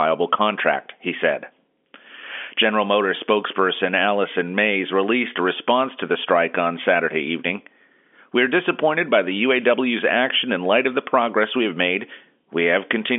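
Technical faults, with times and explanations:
Nothing stood out on listening to this telephone-band speech.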